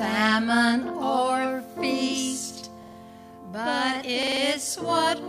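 A short stutter at 2.83–2.97 s, then a longer one at 4.23–4.41 s: a repeated buffer, where a 46 ms piece, fitting a 2048-sample buffer, replayed three, then four extra times.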